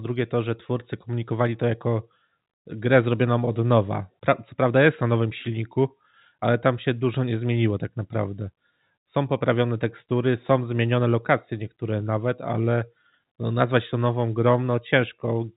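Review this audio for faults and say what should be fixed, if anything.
Nothing needs fixing: the speech carries the 4 kHz ceiling expected of G.711 telephone coding, and no faults are audible.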